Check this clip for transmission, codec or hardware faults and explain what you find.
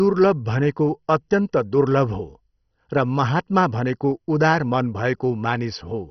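There's one fault, and it runs the whole way through the speech: heavy MP2 compression damage, or at least that's the likely cause. The top end is simply gone, with nothing above about 6.1 kHz, so it sounds dull. Layer II splits the signal into 32 sub-bands, and when bits run short it switches off the upper bands and coarsely quantises the rest. That gives the gurgling, granular texture here, which points to a very low rate, around 32 kbps.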